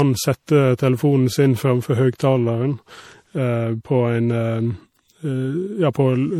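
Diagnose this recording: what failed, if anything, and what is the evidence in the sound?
Generation loss at the codec stage runs through the whole speech clip: the sound is swirly, hollow and smeared, with blurred attacks and nothing above about 19.1 kHz. That fits MP3 at around 64 kbit/s, likely re-encoded a few times. A single encode wouldn't stack this much swirl.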